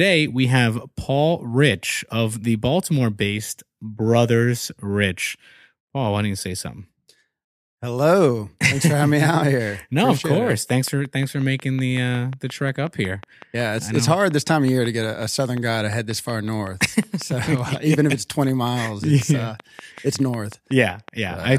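Speech, and from 10.35 s right through to 21.46 s there's a train of clicks laid over it: sharp, near-identical ticks at a steady 5.5 or so per second, around seventy in all, poking up roughly 5 dB above the speech and heard in the gaps between phrases too. That regular, same-shaped pulsing is most likely interference from nearby equipment or a faulty connection or power supply.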